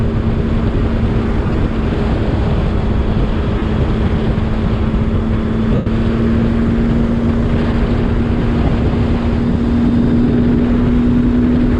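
Bluetooth LE Audio frames were lost four times: scattered short dropouts across 1.47 to 1.59 s, then 3.58 to 3.62 s, 5.75 to 5.87 s and 8.67 to 8.69 s. Each time, the LC3 decoder filled the gap by repeating the last spectrum with randomised signs, so tonal content smears into noise. The 5.75 s gap, about 112 ms long, is long enough to fade audibly toward silence.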